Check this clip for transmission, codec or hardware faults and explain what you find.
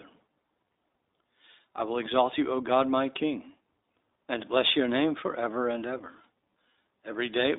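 Yes, there's one fault, running through the whole clip: iLBC codec coding. Nothing gets through above about 3.8 kHz, and each 20 ms frame is coded on its own, so the speech comes out clear but audibly rough and synthetic.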